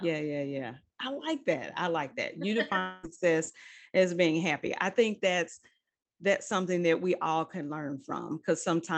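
From 2.79 to 3.05 s the speech breaks off for about a quarter second, likely a long network dropout. The receiver fills nearly the whole gap by stretching the last sound into a fading buzz or hiss, never reaching silence, and the speech resumes with that stretch lost.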